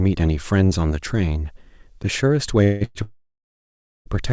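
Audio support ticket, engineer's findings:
Call audio freeze, three stalls: 2.64–2.83 s, buzzy sustain of the last sound; 2.85–2.97 s, brief fill then 0.04 s of silence; 3.03–4.08 s, fade to near silence lasting 0.93 s. Sound resumes where it stopped, with nothing skipped. Likely jitter buffer underrun from delayed packets, with each stall adding its length to the delay.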